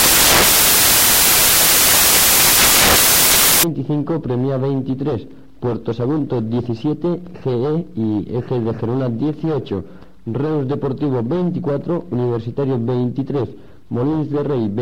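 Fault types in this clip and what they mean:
samples built from the wrong bytes: each sample's bytes are joined in the wrong order or offset, so the rapidly changing low bits land in the high positions, producing loud, harsh broadband noise from 0.00 to 3.63 s. The waveform looks like a dense block, and the spectrogram is broadband fill.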